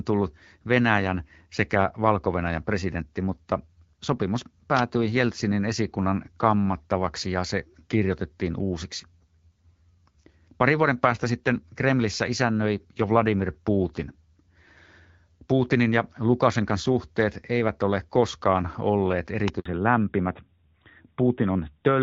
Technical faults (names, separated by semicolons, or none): electrical switching spike; handover gap; fallback to narrowband